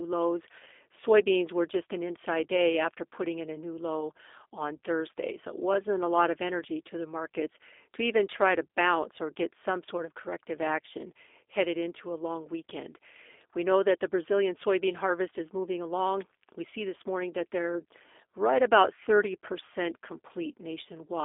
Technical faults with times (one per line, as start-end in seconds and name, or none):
0.00-21.25 G.729 codec